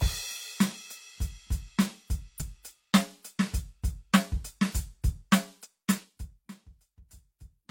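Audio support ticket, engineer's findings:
Short glitches at 2.37–2.43 s and 5.61–5.67 s in the music; damaged data in the compressed stream, decoder losing sync and jumping to the next frame header.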